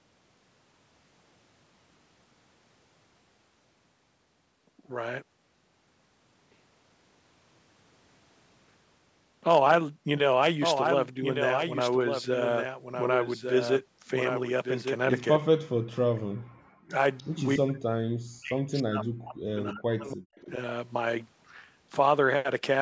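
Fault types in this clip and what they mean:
Background gated by the echo canceller: while the far-end loudspeaker played, the canceller clamped the microphone path, so the room sound here falls away by about 40 dB for roughly a fifth of a second around 15.6 s, then returns once the canceller releases.
Speech suppressed in double talk: with both ends talking at once, the canceller seemingly mistook the near talker for echo and attenuated both. The speech dips by around 40 dB in short pieces at 16.1, 16.7 and 17.6 s, then for about two seconds from 18.4 s.
Echo leak: the canceller likely failed to remove all of the loudspeaker signal its microphone captured, so a faint, delayed copy of the speech comes back about 288 ms late, around 20 to 25 dB below the talker, in brief scraps at 17.2 and 20.4 s.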